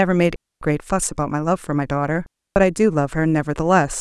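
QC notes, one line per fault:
0.36–0.61 s and 2.26–2.56 s, digital wireless dropout: the speech cuts to near silence for about 256 ms and then about 298 ms, with clean edges and no crackle or noise burst on either side. The radio link between transmitter and receiver lost too much data to rebuild the signal, so the receiver muted its output with a very fast fade instead of passing garbled audio, leaving a tidy gap.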